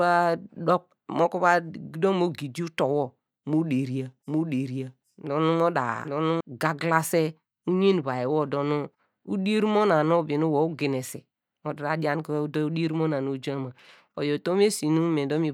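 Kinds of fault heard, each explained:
Doubled audio track: from 4.27 s to 6.41 s, just after "mo deria", a second full-band copy runs roughly 0.7 s behind at about the same level, starting and stopping abruptly with no decay or room colour, likely from a slower second capture path.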